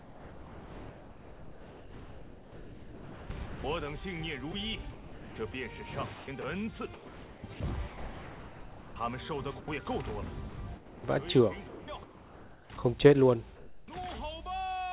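From 0.0 to 4.0 s, 4.5 to 5.5 s and 6.1 to 9.0 s, the sound is chopped, likely by the sender's voice detector switching on and off. Quiet parts drop into synthetic comfort noise, about 3.5 s, 0.5 s and 1.8 s of it.

At 9.60 s, about 80 ms of sound drops out and comfort noise fills the gap. The voice detector likely judged that moment to be background. Then the sound returns.

From 10.5 to 11.0 s and 11.7 to 12.7 s, the same chopping comes back, likely from the voice detector again. About 0.4 s and 0.9 s are swapped for comfort noise.

From 13.56 to 13.88 s, comfort noise stands in for the background. The real background sits about 21 dB below the loud parts. The fill is flat and featureless, about 1 dB off in level. The gap likely comes from discontinuous transmission. Throughout, nothing is heard above 4 kHz, which fits a G.711 call codec.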